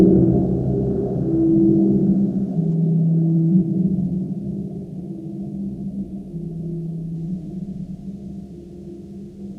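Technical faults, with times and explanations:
Nothing stood out on listening to the audio.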